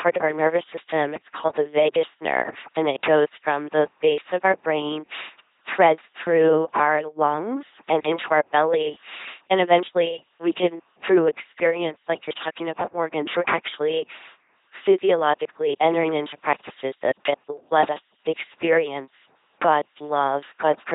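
The speech has been carried through an LPC-10 vocoder for its whole length, with heavy damage, and the reduced sound fits a coder running at about 2.4 kbit/s. Rather than the waveform, only a ten-pole vocal tract filter survives, excited each moment by either a pulse train or noise. Hence the buzzing, mechanical robot voice throughout, with stray buzz or hiss where voiced and unvoiced are misjudged, and nothing above 3.8 kHz.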